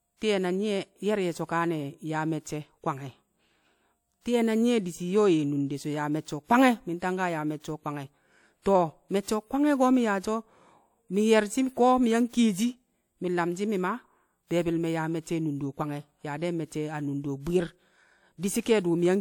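Pre-echo appears four times in this speech: at 4.21 s, at 7.60 s just before "o̱ kwange̱", at 8.62 s just after "o̱ kwange̱", and at 12.29 s between "mi̱ yang" and "kiyeshi mi̱ nlamshi̱ mi̱". Each time, a transform codec spread the quantisation noise meant for a sharp onset back across its block. A short hiss of 37 to 46 ms leads into the attack and blunts it. Unlike reverberation, which trails after a sound, this hiss comes before it.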